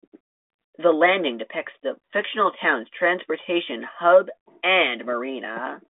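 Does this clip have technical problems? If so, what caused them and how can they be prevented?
No technical faults are audible.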